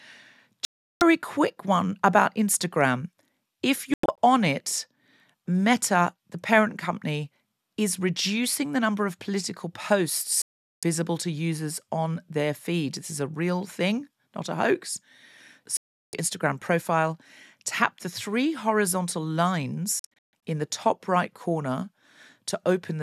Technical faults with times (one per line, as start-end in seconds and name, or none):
0.65-1.02 digital broadcast dropout
3.94-4.18 digital broadcast dropout
10.42-10.83 digital broadcast dropout
15.77-16.14 digital broadcast dropout
19.99-20.34 digital broadcast dropout